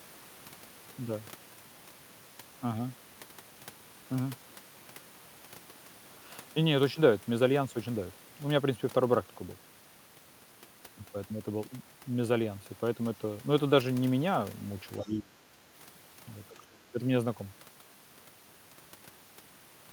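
At 15.02 to 15.06 s a faint scrap of a second voice slips in, roughly 30 dB below the main talker. This is the other side's voice leaking through. The likely cause is a loudspeaker echo that the echo canceller left partly in the microphone signal. Unlike crosstalk or a background talker in the room, it is brief, and it sits directly under the main talker's speech rather than running continuously.

Overlapping that leak, from 15.03 to 15.35 s and again from 16.69 to 16.98 s, the main voice sinks by something like 20 dB, then recovers. This is speech suppressed in double talk. The likely cause is that both sides spoke at once and the canceller, unable to separate its own talker from the echo, turned everything down. A dropout or a gap from packet loss would cut out abruptly and completely. Here the voice ducks in level, and the dips come only while the other side is speaking.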